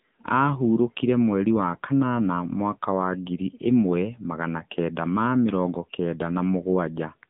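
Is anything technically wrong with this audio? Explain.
Yes. Throughout the whole clip, the speech has passed through an AMR narrowband mobile codec. It was coded as a telephone-band signal and rebuilt from a compact vocal-tract model, which fits a low AMR-NB mode near 8 kbps. The result is plainly audible codec damage: a thin, boxy line from about 150 Hz to 3.7 kHz, with nothing above, and a buzzy, synthetic edge.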